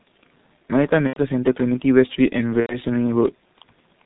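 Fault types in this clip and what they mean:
G.723.1 codec: The speech sounds muffled and hoarse throughout, with nothing above 4 kHz and consonants smeared into one another. The damage is heavy. The cause is an early internet-telephony codec that cuts speech into 30 ms frames and rebuilds it from a coarse voice model that updates only once per frame. That model can't follow quick changes in the voice. The thin, rough result fits its 6.3 kbit/s mode.
VoIP packet loss concealed by the speech codec: At 1.07 to 1.20 s and again at 2.60 to 2.79 s, the speech turns into a stretched, buzzy or noisy sound that fades, then stays weak and rough briefly before recovering. When packets went missing, the decoder kept repeating its last pitch and filter while lowering the level. Each gap suggests about three 30 ms frames lost. Because every frame depends on the one before, the damage continues after packets resume.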